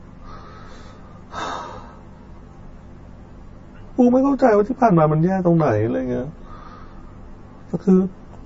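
From start to finish the speech carries channel delay (comb filtering). One channel of what was a two-channel signal runs late by roughly 10 ms, and when both were folded to mono the shared content cancelled at regularly spaced frequencies. The first notch sits around 40 Hz, with further notches following at intervals of roughly 100 Hz. At this delay the colouring sits at the boundary between a hollow, phasey tone and a rough, faintly doubled quality. On a spectrogram this appears as a comb of fixed dark horizontal stripes running unchanged through the whole clip.

Also present throughout is MP3 compression, likely at a low bitrate around 32 kbps given how plainly the damage can be heard. With so few bits available, the encoder discards weaker frequency lines, and these blink on and off from one frame to the next, giving the speech a watery, swirling texture and softening its attacks. A spectrogram shows a hard ceiling with nothing above 7.5 kHz, and below that ceiling, small holes flicker in and out.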